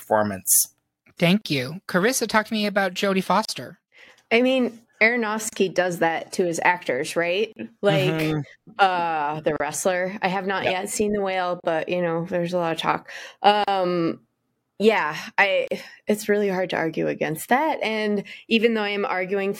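Brief dropouts of about 37 ms break the speech at 1.41, 3.45, 5.49, 7.53, 9.56, 11.60, 13.64 and 15.68 s, each with smeared edges. These are gaps at joins of encoded pieces: each piece, encoded separately about every 2 s, kept its encoder's start delay and final-frame padding.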